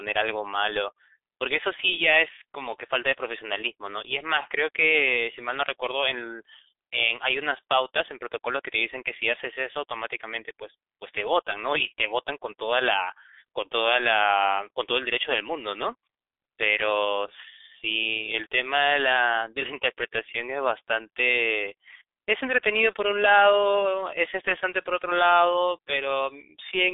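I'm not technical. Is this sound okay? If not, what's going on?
No. From start to finish, the speech has gone through the G.723.1 codec, an old internet-phone format. Everything above about 3.7 kHz is gone, so voices sound muffled and hoarse. The heavy squeezing also smears consonants together.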